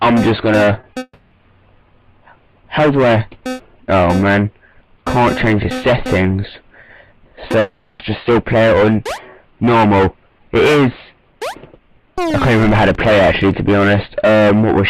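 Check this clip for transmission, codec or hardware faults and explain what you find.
There are two kinds of transmission fault here, both packet-related, and most of them cluster near the start.

Short concealed packet loss shows up at 0.81, 0.93 and 0.99 s. Each time about 20 ms of audio didn't arrive, and the receiver patched the gap by extending the preceding sound before blending back in. You hear quick smears or wobbles in close succession.

Long network dropouts come right after, from 1.03 to 1.33 s, and again from 7.59 to 8.01 s. The first has roughly 280 ms of synthetic continuation that fades, then about 30 ms of silence before the audio resumes. The second is about 400 ms of continued sound with no silent gap, and the audio picks up further on with that stretch missing. The likely cause is the stream stalling entirely rather than losing isolated packets.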